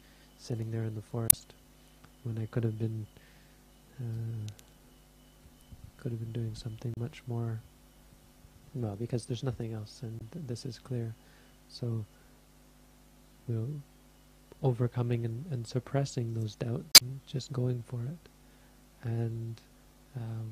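Damaged data in a compressed stream breaks up the audio at 1.27–1.34 s, 6.94–6.97 s, 10.19–10.22 s and 16.92–17.02 s. Corrupt bytes make the decoder misread frames and hunt for the next frame header. Each 28–104 ms disturbance ends once it resynchronises, which sets it apart from a plain dropout.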